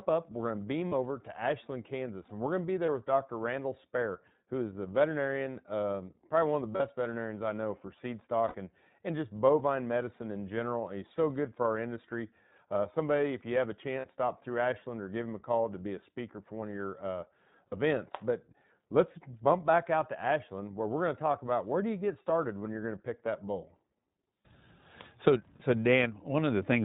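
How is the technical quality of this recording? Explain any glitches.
The speech carries constant iLBC codec coloration plus seven short dropouts concealed by the decoder.

iLBC codec: throughout, the sound is band-limited with nothing above 4 kHz and has a plainly audible rough, slightly synthetic edge. The codec codes each 20 ms frame's excitation independently at 15.2 kbps, trading naturalness for robustness, so consonants lose air.

Lost iLBC frames: gaps occur at 0.88 s, 2.86 s, 6.76 s (after "probably one of the", before "veterinarians I know for"), 8.48 s (after "I know for seed", before "and and just bovine"), 14.00 s, 17.68 s (after "one of your uh") and 25.56 s. They last about 40 ms each, except 20 ms at 2.86 s and 60 ms at 8.48 s, which fits one to three missing 20 ms frames. The decoder fills each gap by repeating the last pitch cycle mixed with noise, heard as a brief held, buzzy vowel. 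Speech recovers almost immediately afterwards because every frame decodes independently.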